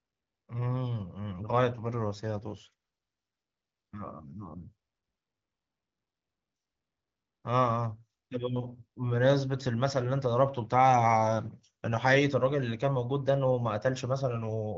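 No technical faults can be heard anywhere in the recording.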